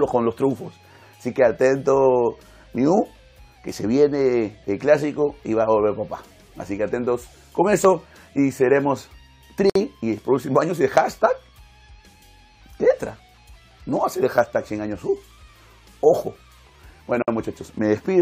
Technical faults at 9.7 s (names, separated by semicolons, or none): gap at a join of encoded pieces